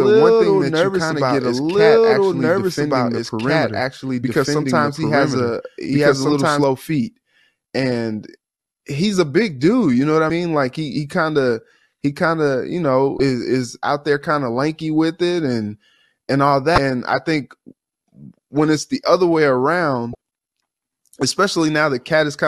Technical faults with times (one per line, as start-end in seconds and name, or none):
0.00-6.64 doubled audio track
10.27-10.30 damaged data in a compressed stream
13.17-13.20 damaged data in a compressed stream
16.75-16.78 damaged data in a compressed stream
20.12-20.15 damaged data in a compressed stream